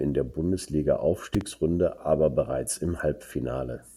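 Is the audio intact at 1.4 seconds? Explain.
No. From 1.35 to 1.43 s there is a loud pop, most likely a sudden voltage step or spike entering the chain, such as from a plug, switch, static discharge or driver glitch, which the following circuits shape into a brief pulse. It is heard as two sharp pops in quick succession, roughly 10 dB louder than the speech, sitting on top of the speech, which keeps going underneath without a break.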